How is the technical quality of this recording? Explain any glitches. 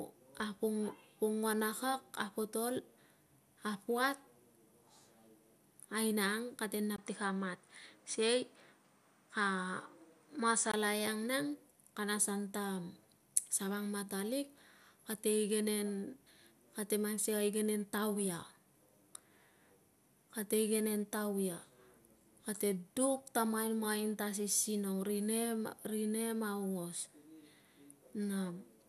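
The recording has one clear glitch, in the speech from 6.96 to 10.74 s. There the sound briefly goes duller, then recovers. This is most likely an input switched to a poorer device. A gap of about 20 ms marks the change, after which nothing above 10 kHz comes through and a faint new noise floor sits roughly 45 dB down, at much the same level. That short gap and changed noise floor point to a swapped input device rather than a simple filter.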